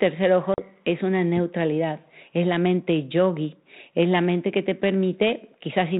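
At 0.54 s the speech drops into a hard-edged silent gap, the sign of packet loss on an ADPCM call. About 40 ms of audio is missing, roughly two packets' worth. The gap ends by 0.63 s. Then the decoder's prediction and step size no longer match the sender's. So the speech comes back with some slight distortion. It settles within a few tens of milliseconds. The G.726 coding at 32 kbit/s adds only light damage.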